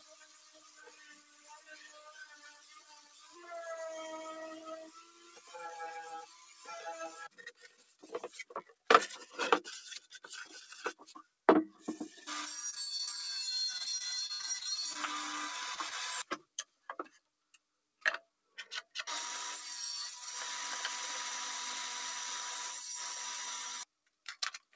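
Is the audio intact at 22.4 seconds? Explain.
No. At 22.4 s, as throughout the clip, a noise suppressor applied to music or sounds treats sustained tones and tails as noise, swinging gain by roughly 15 dB. Attacks pass while held sound sinks, so it pumps. The waveform shows collapsing envelopes after each onset, and the spectrogram shows smeared, flickering sustains beneath the call codec's cutoff at 8 kHz.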